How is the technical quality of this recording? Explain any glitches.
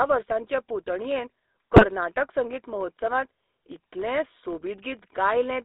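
The recording is poor: the speech is band-limited and buzzy throughout, and one brief stretch breaks up badly.

Throughout, the sound has the GSM full-rate codec's character. The band is held to roughly 200 Hz–3.7 kHz, and the vocal-tract model is excited by a coarsely sampled pulse train, so voiced sound turns gravelly and buzzy. That rasp, rather than simple muffling, separates it from plain telephone filtering and fits a 13 kbps GSM full-rate link.

From 1.73 to 1.87 s, GSM bit errors corrupt the decoder's filter, pitch and gain parameters. The voice bends into squawks and gargling pops, with the level jumping. That span suggests about seven 20 ms frames. Unlike packet loss, which leaves gaps or repeats, the sound here keeps going but is distorted.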